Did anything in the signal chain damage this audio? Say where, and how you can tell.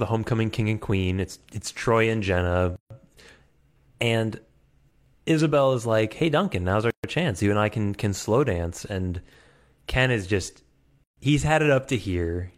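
Yes. Sample clock jitter runs through the whole recording and comes from the converter stage. A rough hiss rides on the speech, growing on loud and bright sounds and disappearing in pauses. An unsteady sampling clock, wandering by a few microseconds, produces error about 35 dB below the signal.

The second fault is a gap at a join of encoded pieces, at the codec stage. Silences fall at 2.76–2.90 s (143 ms), 6.90–7.04 s after "now's our" and 11.04–11.17 s after "is just" (133 ms each), every 4 s. Separately encoded chunks were joined with their start delay and end padding left in.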